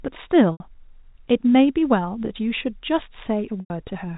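Packet loss with pitch repetition at 0.52 s and 3.6 s: gaps of 80 ms and 100 ms, consistent with 20 ms packets, are bridged by repeating the last pitch period, giving a buzzy hold fading to silence.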